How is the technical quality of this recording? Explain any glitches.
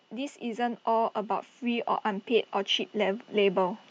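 The recording has one fault: automatic gain rising. From 0.09 s to 3.82 s the gain control, judging the input too quiet, lifts level by about 8 dB, so speech and background swell together; the waveform envelope widens steadily and the spectrogram brightens evenly.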